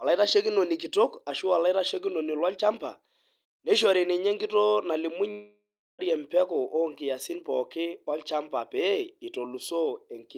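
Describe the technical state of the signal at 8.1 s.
At 8.1 s the speech signal is intact, with no audible fault at that moment.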